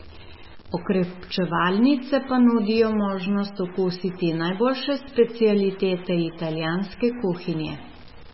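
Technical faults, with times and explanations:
throughout, stuck bit: distortion sits on the speech and fills the pauses with noise, likely from one converter bit stuck. Unlike clipping, it persists even at low levels.
throughout, MP3 compression: nothing above 5.6 kHz, with a watery, swirling texture and smeared attacks, likely heavy MP3 encoding, which fits a bitrate near 17 kbps. Unlike plain low-pass filtering, it warbles.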